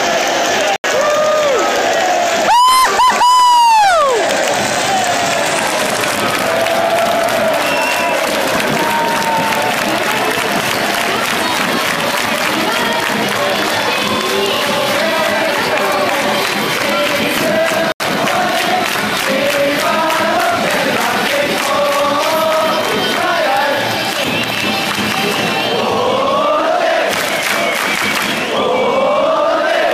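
At 0.76 s the sound drops out for 80 ms, a block of digital silence ending at 0.84 s. The same 80 ms hole returns at 17.92 s. Each time the output was zeroed, likely from an unfilled buffer, cutting out and back with no fade.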